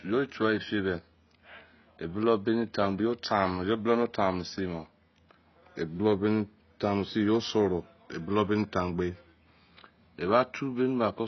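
AAC compression runs throughout the speech, with nothing above 6 kHz, leaving it dull and smeared with a watery, warbling texture on sibilants. The cause is likely a low-bitrate AAC-LC encode, consistent with about 16 kbps, where the encoder cuts the top band and starves the rest.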